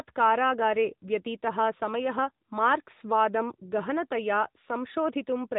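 From start to finish the speech carries AMR narrowband mobile codec damage, and it is plainly audible. Nothing above 3.8 kHz survives, so sibilants and breath detail are gone and the voice sits in a boxed-in telephone band. The codec rebuilds each 20 ms frame from a vocal-tract model excited by sparse pulses, which gives the speech a buzzy, synthetic edge; the degree of roughness fits a middle AMR-NB mode around 10 kbps.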